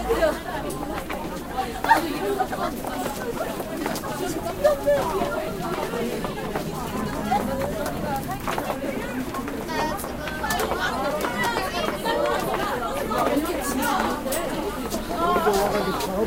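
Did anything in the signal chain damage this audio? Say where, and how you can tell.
No, nothing in the chain audibly damages this recording of sounds, and no stage leaves any trace I can point to.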